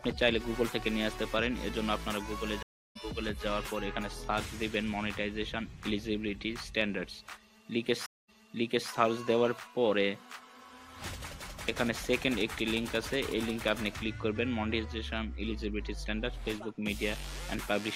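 A stream reconnect happens twice. At 2.63 s the audio drops out for 0.33 s, then resumes about a fifth of a second later. At 8.06 s a 0.22 s gap ends with the sound restarting 0.63 s earlier, repeating a resent stretch.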